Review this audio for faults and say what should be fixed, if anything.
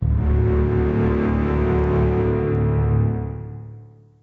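Gain pumping runs through the whole clip, with the level swinging by roughly 20 dB. Loud and quiet moments end up pressed close together and the sound is squashed. The likely cause is input gain set far too high for the microphone, so a fast limiter or compressor keeps clamping down on each peak and releasing between them. The 8 kHz bandwidth of the call path is not part of this fault. To prevent it, lower the input gain so that peaks no longer drive the limiter.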